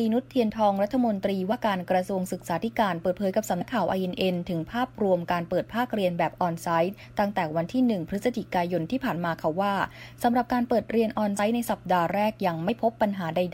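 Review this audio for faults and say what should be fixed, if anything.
Compressed frames are skipped at 1.49–1.53 s, 3.60 s, 11.33–11.39 s and 12.68–12.70 s, jumping ahead by around 50, 70, 70 and 20 ms of audio. On a waveform the envelope abruptly changes shape, and a spectrogram shows a brief vertical discontinuity. To prevent this, repair or re-fetch the damaged or missing frames, or re-encode from an intact source with error checking on transfer.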